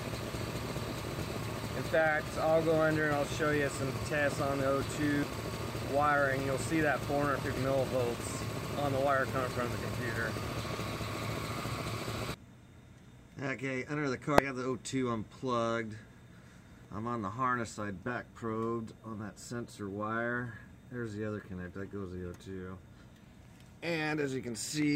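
At 1.20 s, 5.23 s, 7.57 s, 14.38 s and 16.85 s the audio is interrupted by brief blips, each only a few milliseconds long, caused by damaged data in the compressed stream. At each point some of the encoded bytes are corrupt, so the decoder misreads the affected frame, briefly loses synchronisation and resumes at the next valid frame header. The mangled frame comes out as a brief glitch before playback carries on.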